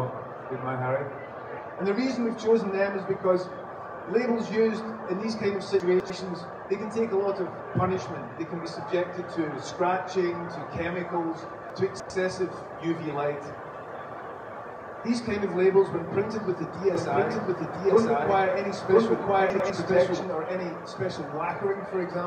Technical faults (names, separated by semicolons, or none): chunks out of order; doubled audio track